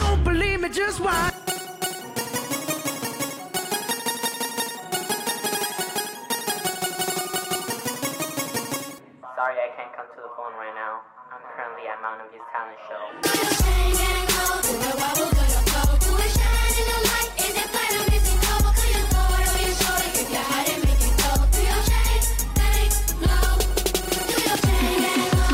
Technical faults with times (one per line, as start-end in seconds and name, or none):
none